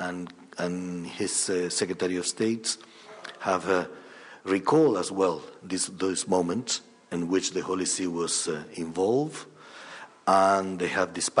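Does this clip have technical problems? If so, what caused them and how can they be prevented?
No, nothing stood out as a technical problem on listening to this clip.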